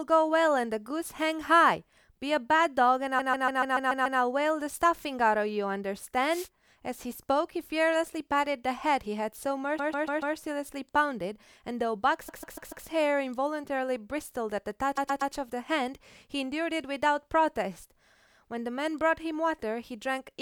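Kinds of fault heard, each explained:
Repeated frames: The speech stutters, with the same short fragment looping back-to-back, at 3.18, 9.78, 12.28, 14.97 and 18.13 s. The looped block is 144 ms in the first three and 120 ms in the last two. It plays up to seven extra times at 3.18 s, stretching the clip by about a second there. A run of compressed frames was sent or stored more than once, and the decoder played it again each time.
Wireless microphone noise hit: A brief swish of static rises over the speech from 6.30 to 6.48 s, lasting under a fifth of a second. This is the sound of an analogue FM radio microphone's signal dipping as reflected paths cancel at the receiver. As the signal drops, the receiver's own noise climbs, then recedes once reception recovers.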